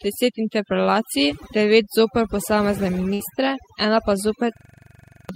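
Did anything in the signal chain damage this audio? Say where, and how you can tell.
Yes. Throughout, overdone noise removal in call processing leaves the background near-silent with twinkling specks, unlike codec smearing, which keeps the hiss.

At 3.13 to 3.21 s, a burst of packet loss on the network holds and fades the last sound for 60 ms, then skips ahead; the missing audio sets it apart from a dropout.

From 4.57 to 5.29 s, a system hang loop in the driver or buffer repeats one 42.67 ms slice 17 times as a 23.4 Hz stutter, which fits a 2048-sample buffer. Exact repetition rules out packet concealment, and about 0.7 s is lost.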